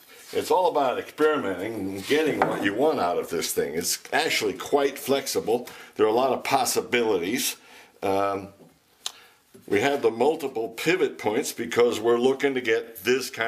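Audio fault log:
12.84–12.89 s, repeated frames: a block of 46.4 ms, a length that fits a single compressed frame, was written or delivered twice, so the decoder plays it once more straight after its first play. The sound steps back by that 46.4 ms slice and replays it, a brief stutter near the end of the audio where the same fragment is heard twice in quick succession. The repeat pushes everything after it 46.4 ms later, lengthening the clip by that amount.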